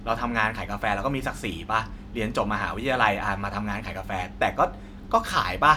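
A short recording of speech, with no technical fault to be heard anywhere in it. Nothing stands out as a problem at any moment, from the opening sound to the final one.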